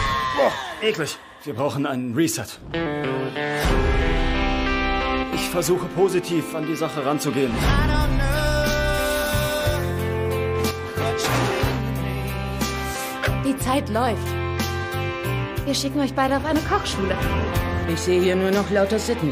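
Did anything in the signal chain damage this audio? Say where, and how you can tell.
Yes, two short dips where the level falls abruptly by about 6 dB: from 5.23 to 5.33 s, and again from 10.71 to 10.97 s, recovering just as suddenly each time. That's the signature of one channel dropping out, likely an intermittent contact in the analogue wiring or a connector. With one side of the stereo pair gone, the mono sum loses half of whatever both channels shared, and anything only on the lost side vanishes entirely.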